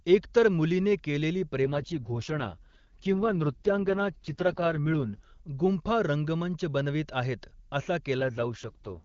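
At 1.64 s the speech turns rough and raspy. This is an AMR rate drop. The band stays as wide as before, and there is no gap. The coarser, synthetic sound points to the lowest AMR-WB mode, about 6.6 kbit/s, down from 23.85 kbit/s. Fewer bits go to the speech model itself. Clarity returns at 5.24 s. The same drop comes back from 8.18 s to 9.03 s, with the same raspy texture.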